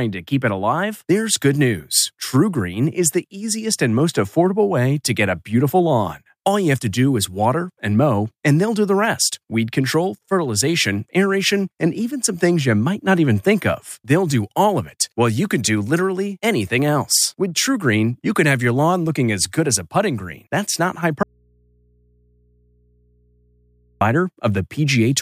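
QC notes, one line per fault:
21.23–24.01 s, audio dropout to a faint residue: speech cuts abruptly for 2.78 s, leaving low mains hum far below the signal, likely a lost feed into a live input.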